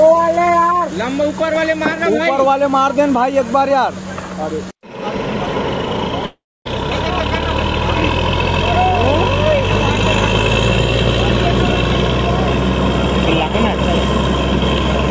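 At 6.26 s the sound breaks off into a fading buzz, then about 260 ms of silence, and it picks up again at 6.67 s with 400 ms simply gone. That's likely a long network dropout, with the receiver briefly papering over the gap before giving up.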